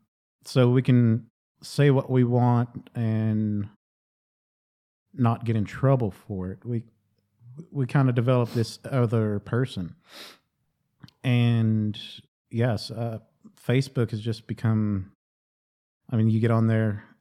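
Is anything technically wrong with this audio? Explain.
No, nothing technically wrong stood out on listening to this speech clip.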